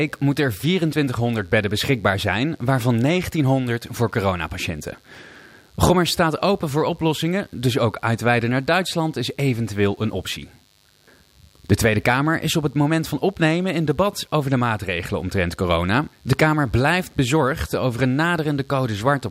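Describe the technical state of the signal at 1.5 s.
Mains buzz is present at 1.5 s, as it is for the whole clip. Sharp switching spikes entering the line twice per 50 Hz cycle spread harmonics up to several kilohertz, giving a steady, raspy buzz roughly 40 dB below the speech.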